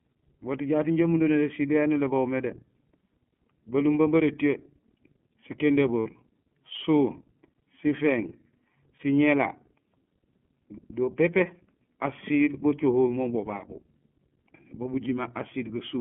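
Throughout, the iLBC codec confines speech to roughly 150 Hz to 3.4 kHz, with a plainly rough, synthetic edge, consistent with its 13.33 kbps mode, unlike smoother wideband codecs. Lost iLBC frames at 6.0 to 6.07 s, about 60 ms, and at 8.97 to 9.00 s, about 30 ms, become a held, buzzy vowel. These gaps fit two frames and one 30 ms frame respectively, and the speech recovers immediately rather than smearing on afterwards.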